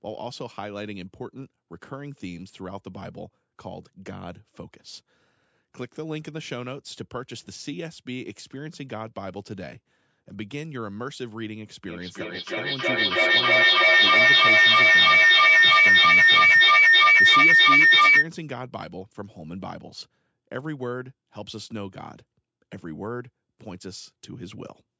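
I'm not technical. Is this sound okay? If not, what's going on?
No. From about 11.9 to 18.3 seconds, the speech comes back at you again and again, roughly every third of a second, sounding thinner and more ringing each time. Instead of fading away, the repeats pile up until they grow louder than the speech itself. This is feedback echo between two devices: two devices in one room are on the same call, and each microphone picks up what the other plays, sending it round in a loop.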